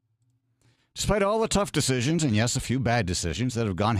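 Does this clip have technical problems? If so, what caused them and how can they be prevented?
Yes: two sharp clicks at 0.99 s and at 3.33 s, just after "and yes a few", most likely from dropped samples, with well under a millisecond of audio lost each time. The waveform jumps abruptly between values, drawing a thin vertical line across the spectrogram. Prevention: use larger buffers so the stream is never starved.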